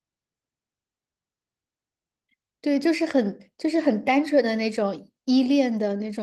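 Nothing in this speech recording stood out as a technical fault on listening.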